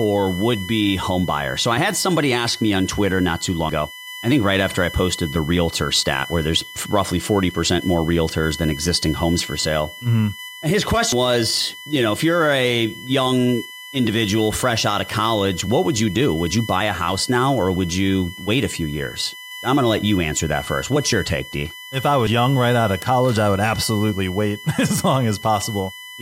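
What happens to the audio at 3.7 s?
At 3.69 s, between "not too" and "I think right after", compressed frames are skipped. Around 200 ms of audio is missing. The jump fits about two dropped frames of 92.9 ms each. The audio jumps ahead at the join by the length of the missing frames.

A USB whine is also present underneath, as it is throughout. It is a fixed tone at 1 kHz, strongest at its 2 kHz harmonic, at about -15 dB relative to the speech. It comes from USB bus current in 1 ms frames leaking into the audio path.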